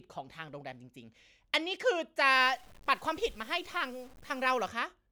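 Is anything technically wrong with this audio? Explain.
Yes. From 2.34 to 4.68 s the speech turns grainy and rough. This is low bit depth without dither. The likely cause is truncation to 8 bits with no dither added first. The rounding error then tracks the waveform instead of spreading out as smooth hiss. Quiet passages become gritty and sputter between the few available steps. The distortion shifts as the speech changes. Its level sits roughly 30 dB below the signal.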